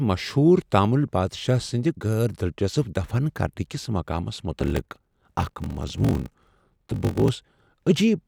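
From 4.58 s to 7.29 s, a block size mismatch (padded): one stage writes shorter blocks than the next reads, which fits a 1024-sample read, and zeros fill each remainder. This leaves a 46.9 Hz buzz and slows the speech to 0.861 times normal speed, with the timbre kept.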